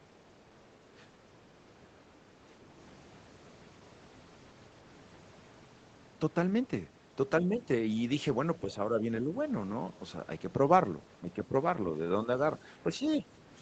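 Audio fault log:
11.21–11.54 s, speech suppressed in double talk: across this third of a second the speech sinks in level, dipping by about 10 dB at its lowest, and in total roughly 150 ms of it is pulled down rather than one clean gap. The likely cause is an echo canceller that, faced with both sides talking at once, could not tell the near talker from the returning loudspeaker echo and attenuated everything together.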